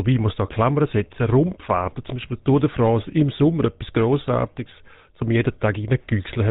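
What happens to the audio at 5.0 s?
At 5.0 s you're hearing the GSM full-rate codec, which runs through the whole clip rather than kicking in at that moment. It rebuilds the voice from a vocal-tract model driven by regularly spaced pulses, keeping only a fraction of the excitation, so the speech comes out buzzy and gravelly, with nothing above 4 kHz. The damage is plainly audible, and the sound fits the old 13 kbps GSM rate.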